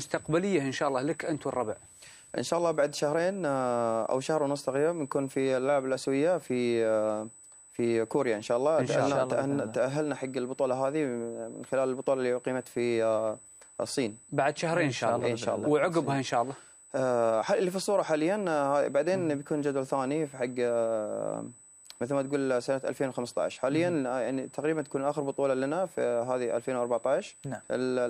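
A thin, fixed-pitch whine sits under the sound from start to finish, centred on 8 kHz with its strongest component an octave up at 16 kHz, and roughly 20 dB below the signal. This is USB whine: the bus draws current in bursts every 125 microseconds, and that 8 kHz rhythm leaks into the audio through shared power or ground, so the tone and its multiples ride along regardless of what the sound itself is doing.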